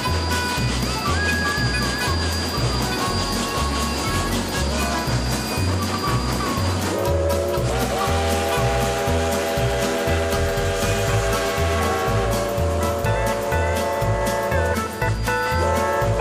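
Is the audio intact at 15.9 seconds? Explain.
Yes, at 15.9 seconds the audio runs through cleanly with no dropout, click, distortion or other fault to be heard.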